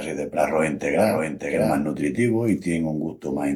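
Speech clip with a doubled audio track, likely from a second, slower capture path: a flat, full-band copy trails by roughly 0.7 s, about 5 dB quieter, from the start until it cuts off abruptly at 1.78 s near "de pratus".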